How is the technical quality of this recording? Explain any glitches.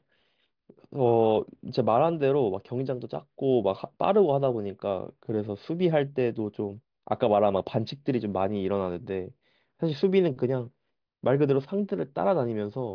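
Nothing in the recording stood out as a technical problem on listening, so there are no glitches to explain.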